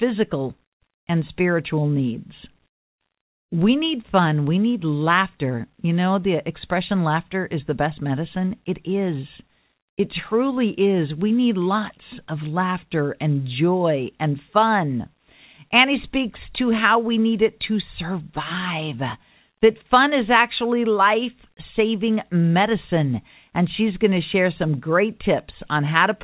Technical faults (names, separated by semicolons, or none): none